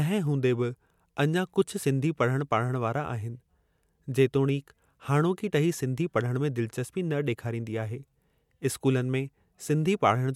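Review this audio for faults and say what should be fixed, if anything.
No faults found; nothing needs fixing.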